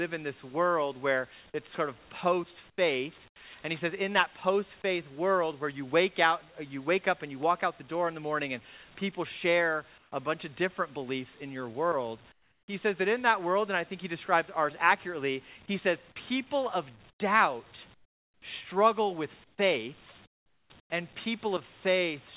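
At 2.70, 3.28, 9.98, 12.32, 17.10, 17.94, 19.44 and 20.26 s, comfort noise replaces the background for 80 to 540 ms. The real background, about 32 dB below the loud parts, becomes steady, featureless hiss, mostly about 10 to 20 dB quieter. The likely cause is discontinuous transmission, with the receiver filling pauses with synthetic noise. Nothing is heard above 4 kHz, which fits a narrowband G.711 call path.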